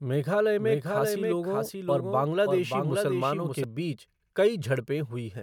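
From 0.58 s to 3.64 s, the speech is shadowed by a second copy of itself, trailing about half a second behind and sitting roughly 5 dB lower. The copy is full-band and dry, with no decay or room colour, and it cuts in and out abruptly at those times. This is a doubled audio track, likely from the same signal being captured again through a slower path or an edit leaving two out-of-step copies layered together.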